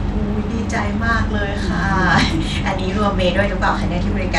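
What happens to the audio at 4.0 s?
At 4.0 s the speech carries the same damage heard throughout the clip: the treble flickers and drops out, with a gritty noise riding on it, likely from Bluetooth SBC compression at a low bit pool, consistent with about 96 kbps. The grit and flickering top, without the swirly smearing of a perceptual codec, set it apart.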